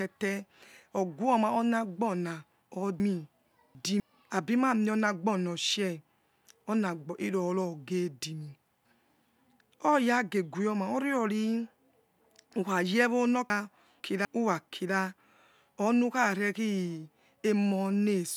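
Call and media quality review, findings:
Chunks out of order, 3.0–4.0 s, right after "ognoma anagibona": a 250 ms block plays three blocks late, so the sound jumbles across three hard joins. Nothing is missing. Probable playout or jitter-buffer reordering.

Chunks out of order, 13.5–14.25 s: the same 250 ms chunk size, with one block landing two positions late. It gives a brief garbled stretch, from a sequencing fault in the buffer or write path.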